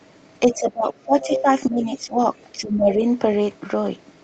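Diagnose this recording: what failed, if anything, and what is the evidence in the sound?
Call processing: the echo canceller likely mistook double talk for echo, causing speech suppressed in double talk. The voice dips about 20 dB at 0.48–1.47 s, about 10 dB at 1.69–2.18 s, and about 15 dB at 2.53–3.04 s.

Call processing: likely incomplete echo cancellation leaves the other side's voice leaking through from 1.2 to 1.69 s, sitting only about 5 dB under the talker.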